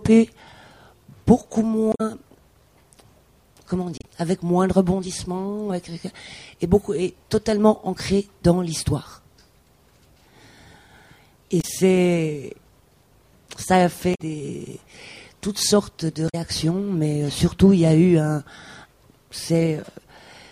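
At 1.90 to 2.01 s, 3.98 to 4.04 s, 11.58 to 11.65 s, 14.11 to 14.21 s and 16.25 to 16.35 s the audio breaks into a chirp, squawk, click or short hole, each lasting roughly 70 to 110 ms. These are damaged data in a compressed stream: corrupted bytes cause the decoder to misread the affected frames, lose sync and hunt for the next valid frame header before normal decoding resumes.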